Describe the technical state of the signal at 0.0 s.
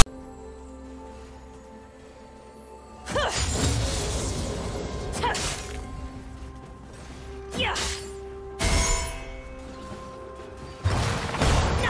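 At 0.0 s the signal opens with file tags played as audio, lasting from 0.0 to about 0.06 s. A block of metadata at the head of the file is being decoded as sample values instead of being skipped. The text characters produce a loud, rasping burst offset to one side of zero, and the zero padding that follows reads as flat silence. The result is a short static blast with abrupt edges before the real audio begins.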